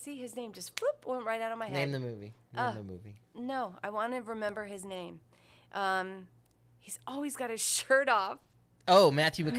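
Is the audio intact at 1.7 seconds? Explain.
No. From 1.69 to 1.71 s, just after "right out of my", there is a lost packet rebuilt from error correction. One packet was likely dropped, and the decoder substituted the low-bitrate copy carried in the following packet, so the 20 ms stretch plays without a gap but sounds rougher and noisier.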